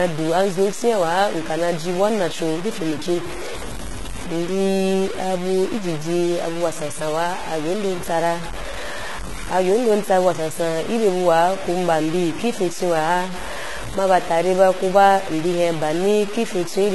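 Throughout the speech, a grainy distortion tracks the sound, roughly 15 dB below it. This is likely low bit depth without dither, about 5 bits, truncated.

Also throughout, the treble is gritty, and sibilants sound metallic, with nothing above 11.8 kHz. This is likely heavy HE-AAC compression, fitting about 16 kbps.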